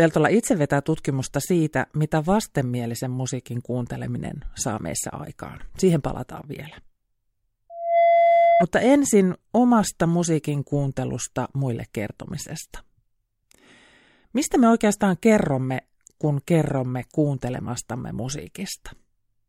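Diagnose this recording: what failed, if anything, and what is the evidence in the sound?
Loudspeaker feedback squeal in the acoustic loop between microphone and loudspeaker, ahead of any converter. From 7.70 s to 8.65 s a single 680 Hz tone swells over roughly a third of a second and sits a few decibels above the speech before cutting off. The microphone picked up its own loudspeaker, and at 680 Hz the loop gain passed unity, so that frequency fed on itself. Unlike an interference tone, it swells rather than starting at full level.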